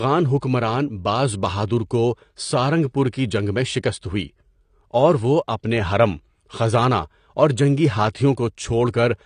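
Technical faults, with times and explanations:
Throughout: AAC compression. The speech has likely passed through a low-bitrate AAC-LC encoder, and the damage fits a stream of around 32 kbps. With so few bits, the encoder quantised its frequency lines coarsely against a hearing model and discarded everything above 9.8 kHz. The speech therefore sounds dull and lacks air, and the codec damage is plainly audible as a smeared, warbling texture where detail was starved of bits.
0.41 s: pre-echo. A sharp attack landed late in a transform block, and the quantisation noise sized for that loud moment was spread evenly across the whole block, including the quiet stretch ahead of it. That noise arrives about 16 ms before the attack and is heard as a brief hiss that anticipates it. Because the block's noise is smeared around the attack, the onset also loses some crispness.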